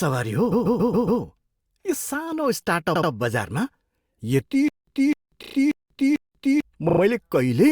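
Repeated frames at 0.51 to 1.21 s interrupt this speech clip: a 139 ms block plays five extra times, a stutter that stretches the audio by about 0.7 s. Repeated frames return at 2.94 to 3.10 s, just after "यो सानो", where a 68 ms block plays twice more and adds 0.16 s. In both places a short run of compressed frames was written or delivered more than once, and the decoder simply played the same data again. A stutter with silent gaps follows from 4.68 to 6.61 s. A 256 ms burst of sound comes back four times on an even 445 ms cycle, each time followed by 189 ms of digital silence, and the material that should have filled that stretch never arrives. The likely cause is a stalled player or stream that, on each retry, replayed its last fragment and then ran out of data.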